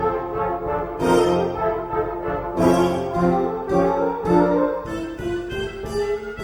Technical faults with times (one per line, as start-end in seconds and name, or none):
0.79-5.84 clock slip clicks